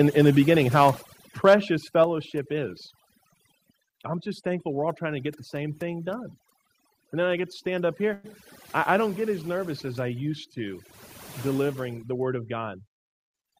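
Throughout the clip the background is pulled down and broken up into twinkling specks. This is overdone noise removal: a noise reducer set too hard is pulling individual frequency bands down whenever they sit close to its noise estimate, taking quiet parts of the voice with them.

At 1.02 s and again at 2.04 s, voice and background together drop abruptly by about 5 dB each time. This is the microphone volume stepped down, likely the call software judging the input too hot and cutting the device's input gain in a single step.

At 8.13 s, right after "get to stand up", the sound stretches into a brief fading buzz or hiss before resuming with "I I don't get" at 8.26 s. This is a call audio freeze, likely from delayed packets emptying the jitter buffer. The receiver filled about 105 ms by extending the last sound, then carried on where it stopped, so nothing was lost but a gap was inserted.

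From 12.12 to 12.84 s, just after "I used to delivering", the speech suddenly sounds hurried while keeping its pitch, running at about 110% speed. This is a jitter buffer speed-up: with too much audio queued, the receiver repeatedly trimmed out short pitch-period slices, around 70 ms in total, to bring the delay back down.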